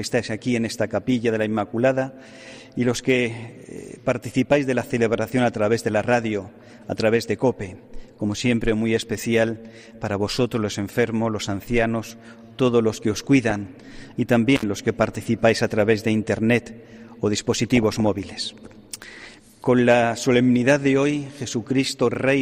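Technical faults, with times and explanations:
13.48–13.67 s and 17.64–18.18 s, DAB burbling: under weak reception, bit errors slip past error correction into the MP2 audio, corrupting samples and scale factors so individual sub-bands lurch in level frame by frame. The result is short blips of noise in single sub-bands. The second burst lasts longer.
14.56–14.63 s, intermittent contact: a loose plug or cable briefly opens, cutting the sound for about 61 ms. Crackle marks the break and the reconnection, and faint hiss remains while the connection is open.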